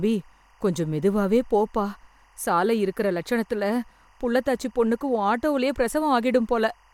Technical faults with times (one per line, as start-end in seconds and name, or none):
0.00-6.94 timecode bleed